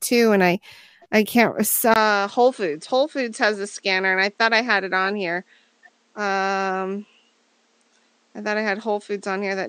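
At 1.94 s the speech cuts out for about 20 ms, and from there to the end it sounds like the input switched to a poorer device, likely a different microphone or a headset profile. Everything above 8.9 kHz is gone, so the voice turns duller and a bit boxy. It also drops a few decibels in level, and a faint new background noise sits well under the speech.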